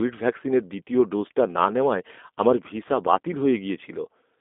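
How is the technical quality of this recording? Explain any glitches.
The speech has been squeezed through a low-rate telephony codec for its whole length. Throughout, a G.729 codec rebuilds each 10 ms frame from a filter and sparse pulses, leaving narrow 250 Hz to 3.6 kHz speech, nothing above 3.8 kHz, and a plainly rough, synthetic edge, which fits 8 kbit/s.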